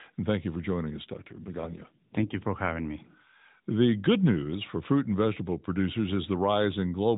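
From 1.04 s, right after "you for joining us", the speech turns buzzier and more synthetic until 2.38 s, before "for having me". This AMR rate drop sounds like the mobile codec falling from 12.2 to 5.9 kbps, leaving fewer bits to model the voice, with no gap and no change in band.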